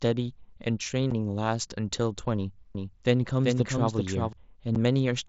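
Right at 1.11 s there's unconcealed Bluetooth headset packet loss: one 7.5 ms voice packet went missing, leaving a tiny hard-edged hole. From 2.75 to 4.33 s you get a doubled audio track, a flat, roomless second copy trailing around 400 ms behind at roughly 5 dB down, likely a second slower capture path, and it cuts in and out abruptly. Then at 4.75 s the same packet loss hits again, another clean 7.5 ms gap, on top of the mSBC link's light wideband graininess.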